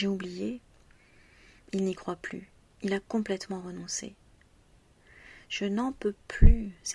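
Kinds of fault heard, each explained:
No technical fault can be heard in this audio. Nothing in the sound points to a problem in how it was captured or passed along.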